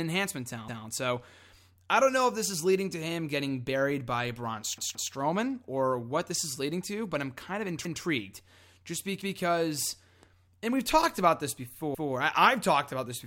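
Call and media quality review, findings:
Repeated buffer, playback path: new audio arrived late, so the device replayed its last buffer of about 171 ms, which fits an 8192-sample buffer. The result is a stutter, with a segment repeated across a hard join, at 0.68–0.85 s, at 7.85–8.02 s after "but I'm kind of", and at 11.95–12.12 s after "we've talked about this". At 4.78–5.12 s, before "or what this is", the segment plays three times. No audio appears to be lost.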